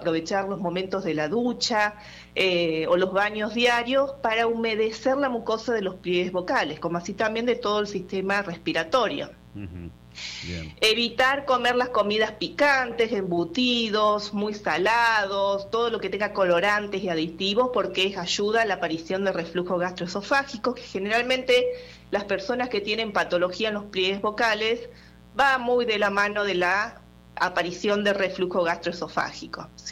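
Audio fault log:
throughout mains buzz: switching spikes from 60 Hz mains leak into the signal path twice per cycle, adding a steady, raspy harmonic buzz roughly 25 dB below the audio.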